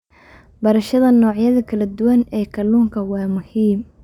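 Throughout the speech there is imaging from linear upsampling, which fits a doubling from 24 kHz to 48 kHz. Faint mirrored images, about 40 dB down, add a metallic shimmer between 12 and 24 kHz.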